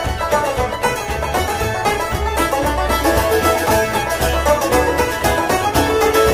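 No technical faults detected in the audio; nothing to flag.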